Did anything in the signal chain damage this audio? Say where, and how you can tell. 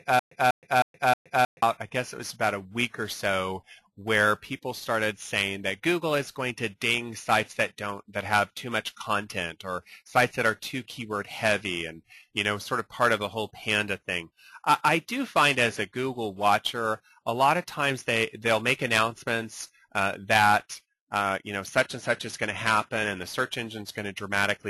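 Yes. From the very start of the clip to about 1.62 s, a stutter with silent gaps is already under way: a 193 ms burst repeats 4 times at a steady 314 ms pace, each repeat followed by about 121 ms of dead digital silence. This is likely a playback or stream buffer stall, where each retry replayed the last fragment and then ran dry, so the audio belonging to that stretch never came through.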